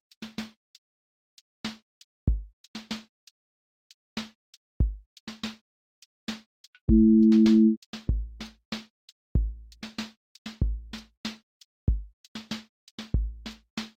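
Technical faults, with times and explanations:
5.80 to 7.45 s, jitter buffer speed-up: the sound runs about 6% fast for this stretch. The receiver drained surplus buffered audio by cutting out many pitch-period-sized slices, roughly a tenth of a second in total. Unlike a resampling speed error, the pitch stays unchanged.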